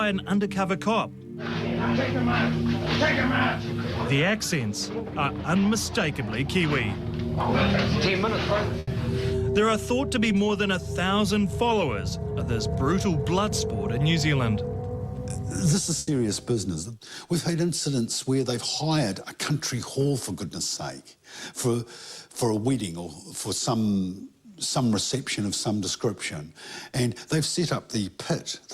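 At 8.79 to 8.90 s and again at 15.99 to 16.10 s, a burst of packet loss: the receiver extends and fades the last sound for about 80 ms, then resumes with roughly 80 ms of audio missing.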